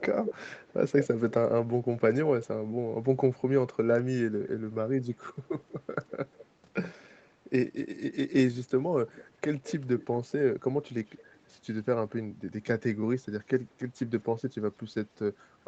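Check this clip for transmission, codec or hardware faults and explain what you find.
The speech carries an echo leak in six places: 0.00–1.34 s, 2.43–2.47 s, 5.28–5.73 s, 6.09–6.46 s, 9.07–10.32 s and 11.05–11.49 s. A delayed copy of the voice trails the original by 183 ms at the start, drifting to 203 ms by the last event. It is likely loudspeaker playback that the far end's echo canceller failed to remove and sent back. At the start the copy is almost as loud as the voice. By 11 s it is barely audible. On a spectrogram, each syllable's harmonic bands reappear shifted right by about 0.2 s. The waveform shows doubled, smeared envelopes in those stretches.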